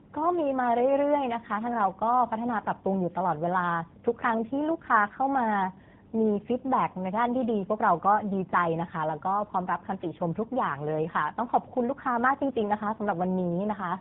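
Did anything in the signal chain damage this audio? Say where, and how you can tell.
Yes, at the codec stage, throughout: tandem speech coding. The call passed through two speech codecs in a row, decoded and re-encoded at each border, with the sound pointing to a GSM full-rate leg, a G.711 mu-law hop, and AMR-NB at 12.2 kbit/s last. Each coder had to model artefacts left by the one before, so errors compound. The speech sounds rough, muffled and warbly from start to finish, with nothing above 3.8 kHz.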